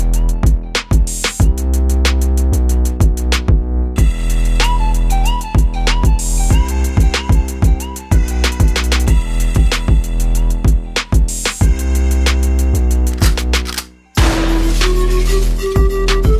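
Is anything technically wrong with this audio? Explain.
No, no technical faults heard.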